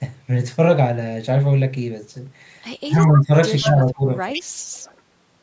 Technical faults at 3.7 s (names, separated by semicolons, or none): speech suppressed in double talk; echo leak